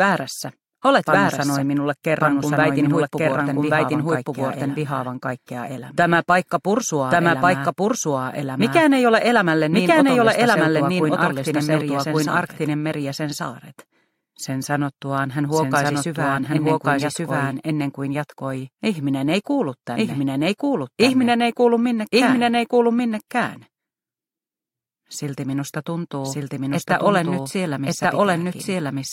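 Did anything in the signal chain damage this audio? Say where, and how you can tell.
Yes: a doubled audio track runs throughout, with a dry, full-band copy about one second behind at roughly equal level, likely from a second, slower capture path or misaligned edit.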